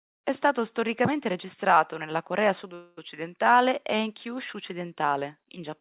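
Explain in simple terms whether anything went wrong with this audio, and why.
At 2.74 s the speech stops moving forward, and for about a quarter of a second, until 2.99 s, the last sound is stretched into a fading buzz before the talking picks up exactly where it left off. This is a call audio freeze. The likely cause is that packets were delayed on the network and the receiving end ran out of audio to play, so it filled the wait. Nothing is lost, but everything after it arrives about 0.23 s late. The muffled, phone-like tone, with nothing above 4 kHz, comes from the call codec.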